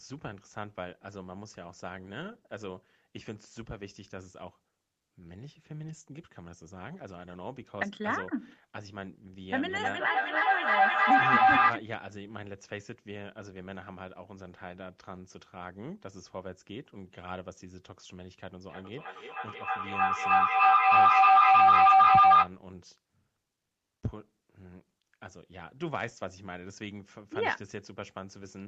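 A shrill tone of about 700 Hz rises out of the speech from 9.42 to 11.84 s, peaking about 16 dB above the talker with repeats roughly 0.3 s apart, then returns from 18.69 to 22.57 s, louder at about 18 dB. Both are feedback howl: two devices in one room share the call, so the loudspeaker feeds the microphone, and each trip round the loop adds gain, narrowing to that favoured pitch.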